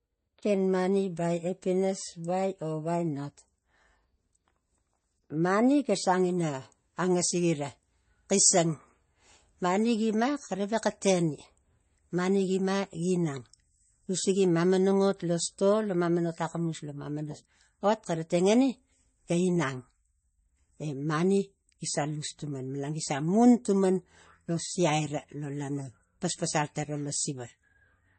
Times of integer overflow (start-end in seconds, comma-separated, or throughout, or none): none